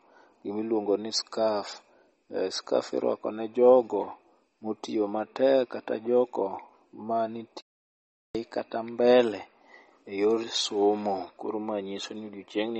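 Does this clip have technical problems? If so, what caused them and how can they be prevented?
Yes. MP3 compression damage runs throughout, likely from a low bitrate near 32 kbps. Nothing survives above 8.3 kHz, and speech sounds watery. Encode at a higher bitrate.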